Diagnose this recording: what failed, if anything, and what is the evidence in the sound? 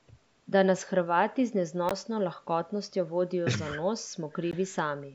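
Bluetooth dropout, likely cause, at 1.89–1.92 s and 4.51–4.58 s: the wireless link briefly goes silent, with abrupt edges or a fade of a few milliseconds, then the speech resumes further along, as though it had kept playing.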